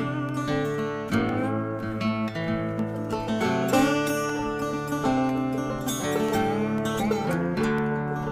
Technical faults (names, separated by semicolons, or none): periodic USB or driver dropouts